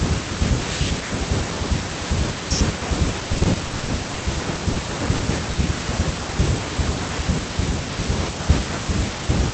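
Repeated packet loss (robotic sound) runs from 3.33 to 4.77 s. Packets kept arriving late or not at all, and each hole, none longer than 40 ms, was patched by extending the previous sound. About a quarter of that stretch is synthetic fill, giving choppy speech with pieces missing.

Short concealed packet loss follows at 5.17 to 5.21 s and again at 5.53 to 5.57 s. Each time, 20 ms of speech failed to reach the decoder, so the receiver continued the preceding sound and blended back in. The result is a brief smear or wobble in the speech, heard through the call's 8 kHz audio bandwidth.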